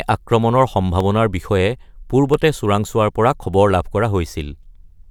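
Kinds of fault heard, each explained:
Dropped samples: Two single sharp clicks, at 1.00 s and at 2.34 s just before "চোৰাংচোৱাৰ পৰা", too brief to remove any speech. The likely cause is a fraction of a millisecond of samples missing, making the waveform jump abruptly to a later value.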